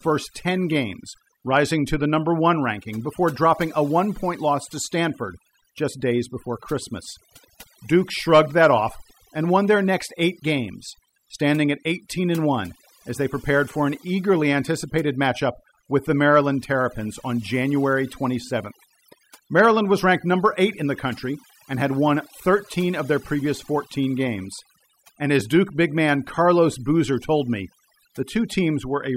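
A speech recording with overdone noise removal throughout: an overly strong reduction pulls bands near the noise floor to silence, leaving twinkling specks in the background, unlike a gate's whole-signal cutoffs.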